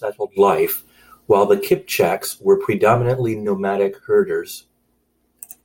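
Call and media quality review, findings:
No findings for this call and media quality review: no faults heard in the speech.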